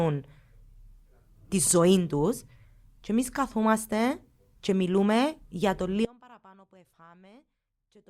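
At 6.05 s the speech hits an audio dropout to a faint residue, about 30 dB down through the end, likely an upstream signal loss.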